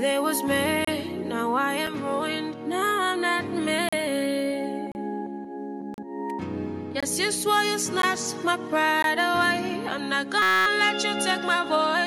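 Hard-edged silent holes interrupt the sound about once per second, the signature of a gap between stream segments. Successive segments, each roughly 1.0 s long, are timestamped slightly apart, and the player pads the difference with silence. The holes fall at 0.85–0.88 s, 1.87 s, 3.89–3.93 s, 4.92–4.95 s, 5.94–5.98 s, 7.00–7.03 s, 8.02 s and 9.02 s, ranging from about 6 ms to 38 ms. No audio is dropped, so each hole adds time to playback. From 10.42 to 10.66 s a system hang loop replaces the sound with a steady buzz at 188 Hz. A 5.33 ms piece of audio repeats exactly 45 times, which fits a 256-sample ring buffer cycling while the driver or host was frozen. Playback then resumes with essentially nothing missing.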